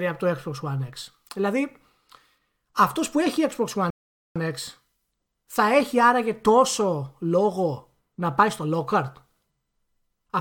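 At 3.90 s the speech drops into silence and then picks up at 4.36 s exactly where it broke off, with nothing skipped. This is a rebuffering stall: playback ran out of downloaded audio and waited for more, adding about 0.45 s.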